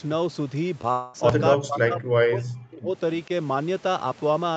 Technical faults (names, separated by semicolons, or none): short concealed packet loss; long network dropout; speech suppressed in double talk